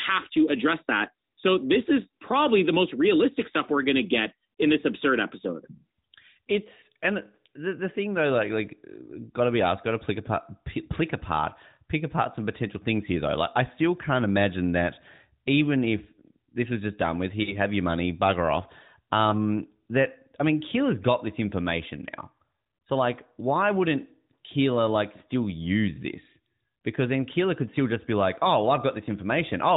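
At 17.44 to 17.59 s and again at 19.30 to 19.34 s, a single lost AMR speech frame of 20 ms each time causes a brief dip or warble. The decoder had no valid frame, so it reused the previous pitch and vocal-tract settings at reduced gain. On a spectrogram, the harmonics smear flat across the gap within the narrowband 4 kHz ceiling, and the waveform shows a short drop in amplitude before the level recovers.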